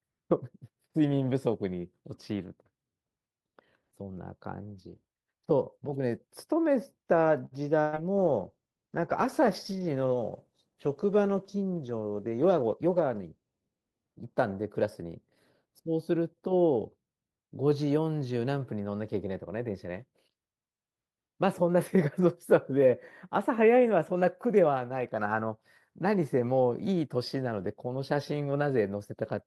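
At 7.45 s there's a short stall from a late packet. The buffer ran dry, so the receiver held the last sound for about 60 ms until the packet arrived, with nothing lost. At 7.81 to 7.96 s comes a burst of packet loss. About 120 ms went missing, and the concealment continued the previous sound and faded it down before the speech picked up further on. From 8.17 s to 15.19 s there's a call bitrate drop, with the encoder squeezed from 48 to 16 kbps and sitting at the bottom for about 5.5 s. Speech turns rough and muffled, losing its top end. Inside that stretch, from 12.37 to 12.87 s, a jitter buffer speed-up trims around 50 ms of pitch periods, so the speech runs about 9% faster at unchanged pitch and sounds hurried.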